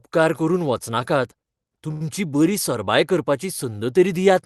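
Speech passed through a WebRTC-style call path, with the top end ending near 12 kHz and the usual coding noise. From 1.91 to 2.03 s there is a short stall from a late packet, just before "बरी सरबाय": a packet arrived late, the jitter buffer emptied, and the receiver stretched the last sound for about 91 ms before resuming at the same point. Nothing is lost, but the sound is held too long with a slight buzz or dip, and everything after it plays about 91 ms later.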